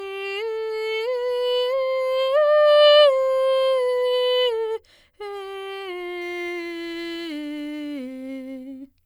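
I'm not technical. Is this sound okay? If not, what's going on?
No. From about 6.22 s to the end, the music picks up a gritty, buzzing fizz that tracks the louder and brighter passages. That is crude rate conversion: the sound was converted from 48 kHz to 44.1 kHz by simply dropping samples, creating tones unrelated to the music.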